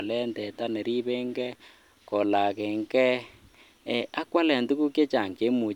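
No technical faults occur at any point in the recording, so there is nothing to place in time order.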